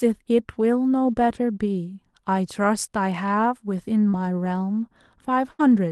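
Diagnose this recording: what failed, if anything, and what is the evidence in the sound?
A short concealed packet loss sits at 4.09 to 4.15 s, at the network stage. About 40 ms of audio never arrived in time, and the receiver covered about 35 ms of it by extending the last sound before blending back into the real signal. It is heard as a brief smear or wobble. What separates it from the later burst is its length: it ends before any fade-down can set in.

Four lost packets were rebuilt from error correction, each lasting 20 ms: 4.13 to 4.15 s, 4.45 to 4.47 s, 5.59 to 5.61 s and 5.71 to 5.73 s. In each case the next packet carried a low-bitrate Opus copy of the missing one, so the decoder had real content to play. Nothing is missing and nothing is extrapolated. The only trace is a momentary roughness and added noise, and that is what distinguishes these from concealment. The Opus call path itself, at 32 kbps with a 12 kHz bandwidth, accounts for the steady codec texture.

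A burst of packet loss runs from 5.51 to 5.61 s. About 80 ms was lost, and the concealer stretched the last sound across roughly 79 ms while turning it down. The result is a held buzz or fading hiss, after which the audio picks up further along with the span in between gone. Unlike the shorter loss at 4.09 s, this one is long enough for the audible decay.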